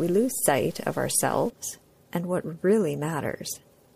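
From 0.0 to 1.5 s the audio turns grainy and gritty, likely from low bit depth without dither: truncation to 7 bits, with distortion around 30 dB below the signal.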